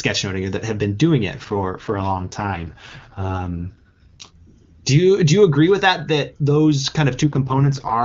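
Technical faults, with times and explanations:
1.38–4.37 s (after "that have been doing", before "do you do you") and 7.25–8.03 s, AMR rate drop: the speech turns rough and synthetic, which fits a fall from 23.85 to 6.6 kbit/s, with no gap and no narrowing of the band, unlike a dropout or bandwidth switch.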